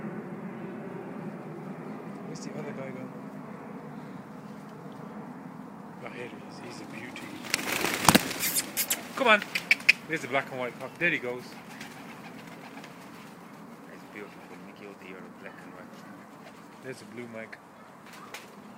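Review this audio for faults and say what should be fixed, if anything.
No faults found; nothing needs fixing here.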